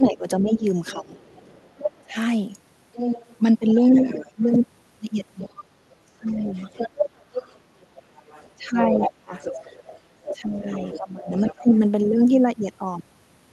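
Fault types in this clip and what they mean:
Speech suppressed in double talk: while both ends talk, the talker's speech dips by roughly 15 to 25 dB in short stretches, deepest around 8.6 to 9.3 s, also near 0.0 to 2.2 s, 3.8 to 4.4 s, 5.6 s and 10.3 to 11.7 s, likely an echo canceller attenuating everything when it cannot separate near speech from loudspeaker echo.
Other side's voice leaking through: a second, fainter voice sits under the talker, quiet at about 25 dB down from 0.86 to 2.02 s, then stronger at about 10 dB down from 2.93 to 4.46 s and across 5.38 to 11.79 s, likely loudspeaker echo left in the microphone signal.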